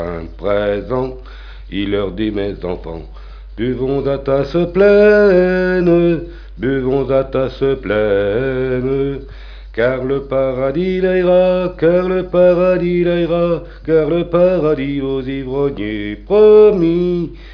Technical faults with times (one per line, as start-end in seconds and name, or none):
none